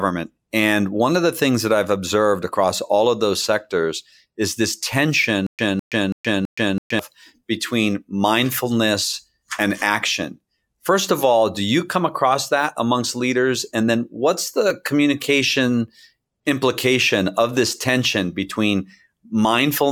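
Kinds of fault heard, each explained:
Stutter with silent gaps: from 5.47 to 6.99 s a 206 ms speech fragment repeats four times, each followed by 123 ms of flat digital silence. This is likely a stalled stream replaying its last buffer before "between mindfulness and action". On a waveform it shows as identical blocks every 329 ms, with blank columns between them on the spectrogram.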